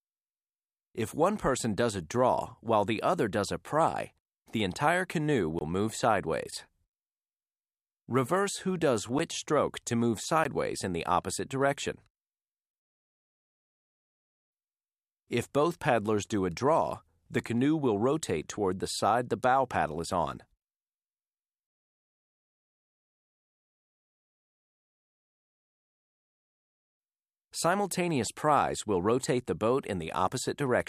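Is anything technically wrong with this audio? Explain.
Yes, there are three blocks of digital silence. They come at 5.59 to 5.61 s (about 21 ms, which fits a dropped 1024-sample buffer), at 9.19 s (about 10 ms) and at 10.44 s (about 15 ms). Each time, the output buffer was likely not filled in time and zeros went out instead, so the audio drops straight to dead silence and returns with no fade. Each dropout is heard as a sharp tick or tiny hole in the sound.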